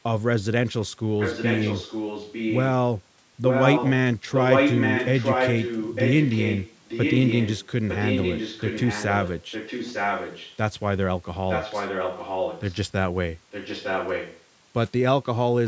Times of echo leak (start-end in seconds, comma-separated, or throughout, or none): 1.18-2.65, 3.47-3.92, 4.34-10.57, 11.49-12.75, 13.51-14.42